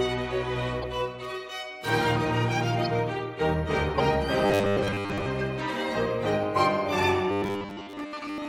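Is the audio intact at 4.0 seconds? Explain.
No. Between 3.96 and 4.01 s, a corrupt frame was decoded: bit errors in a few compressed frames were played back anyway, so misread gains and codes put energy at the wrong frequencies. The music gets a brief glitch, heard as a chirp, squeak, blip or burst of noise, with the error peaking around -10 dBFS.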